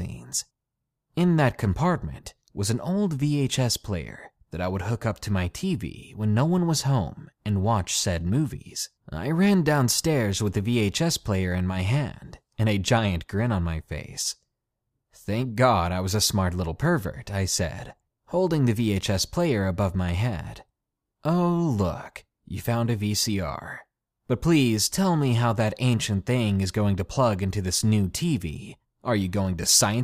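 Speech recording with no audible technical faults.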